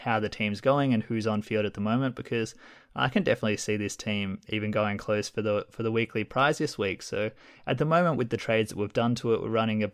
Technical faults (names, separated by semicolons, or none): none